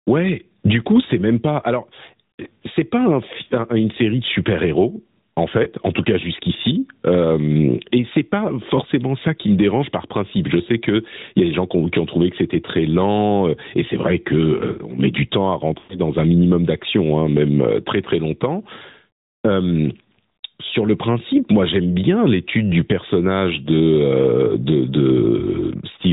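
Gain pumping runs through the whole recording: the level swings by around 15 dB, so soft and loud passages sit unnaturally close in level. The likely cause is input gain set far too high, with a fast limiter clamping down on each peak.

The AMR narrowband mobile codec also colours the entire clip. Nothing above 4 kHz survives, and the speech has a buzzy, synthetic edge from the sparse pulse excitation, which fits a bitrate around 10 kbps, low enough for the damage to be plainly audible.

Lost AMR speech frames occur three times. At 5.64 to 5.68 s, just before "en tout cas jusqu'ici", and again at 12.66 to 12.70 s, between "ont trouvé que c'était" and "lent euh et c'est", there is a brief dip or warble, which fits a single 20 ms frame concealed by reusing the previous pitch and vocal tract settings. From 15.78 to 15.98 s, after "met du temps à" and before "un minimum d'action hein", a longer run of about 120 ms of lost frames leaves the sound smeared and fading toward silence before it returns weak or rough.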